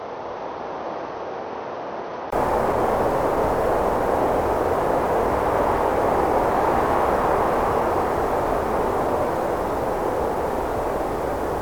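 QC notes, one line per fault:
0.00–2.32 s, input switched to a poorer device: sound is dull, quieter and slightly noisy, with nothing above 6.3 kHz, then a 20 ms gap before fuller sound returns, likely from a narrower-band input.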